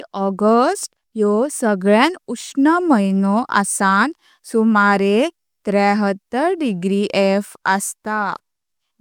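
Listening to this speech recording, nothing technical stood out anywhere along its duration.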